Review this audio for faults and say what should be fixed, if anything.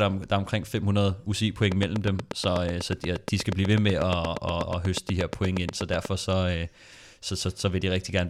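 A train of clicks runs from 1.72 to 6.06 s: about forty regular pops at 8.3 per second, roughly 15 dB above the speech, likely from interference or a faulty connection or supply. A spectrogram shows evenly spaced vertical broadband lines, and the waveform shows sharp spikes. Secure cables and power, and keep interfering equipment away.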